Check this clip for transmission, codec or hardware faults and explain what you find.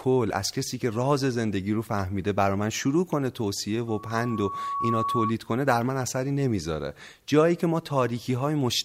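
One fault. Loudspeaker feedback squeal, 3.87–5.33 s: a 1.1 kHz tone from microphone–speaker loop gain exceeding one, swelling over about a second to roughly speech level. On the spectrogram it is a steady horizontal line.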